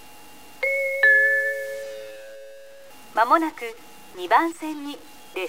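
A stuck bit runs through the whole clip: there's a harsh, buzzy grit riding on everything, and the quiet stretches fill with a steady noise floor sitting at about -40 dBFS. That's likely one converter bit held fixed, knocking samples off by that bit's weight.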